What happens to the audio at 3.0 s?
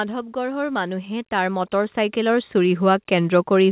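At 3.0 s the clip is inside an automatic gain rise that runs from 0.33 s to 3.48 s. The gain control judged the input too quiet and kept raising its gain, about 12 dB in all, so speech and background noise swell together.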